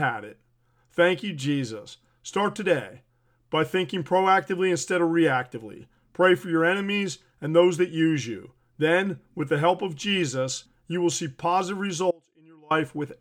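From 12.11 to 12.71 s the speech abruptly drops to a faint residue about 30 dB down for 0.59 s, an audio dropout likely caused by a brief signal loss upstream.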